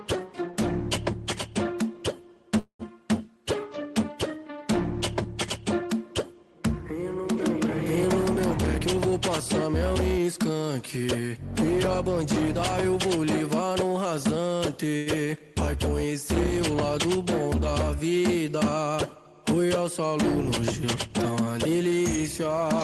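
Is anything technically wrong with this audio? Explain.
Yes. The audio passed through a call path whose top end stops near 12 kHz, which fits Opus at a low bitrate of around 20 kbps, and it carries three kinds of delivery fault.

From 2.59 to 2.82 s there is a call audio freeze, likely caused by packets being held up in transit until the jitter buffer emptied. The receiver filled about 199 ms by extending the last sound into a fading buzz or hiss that drops to about 80 ms of silence before the audio resumes exactly where it left off. Nothing is lost, but a gap is inserted and everything after it arrives late.

Jitter buffer speed-up occurs three times: 8.77 to 9.12 s at 116% speed, 9.67 to 10.76 s at 111%, and 20.85 to 21.92 s at 108%. Each time, the buffer was holding more audio than its target. To shed the excess, the receiver repeatedly removed pitch-period-sized slices, roughly 70 ms, 150 ms and 100 ms respectively. 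Pitch stays put, but the timing tightens and the sound comes across as rushed.

At 14.97 to 15.09 s there is a short stall from a late packet. A packet missed its playout time, so the receiver stretched the preceding sound for 94 ms until it arrived, then continued from the same point. Nothing is dropped. The result is a briefly held sound with a slight buzz or dip.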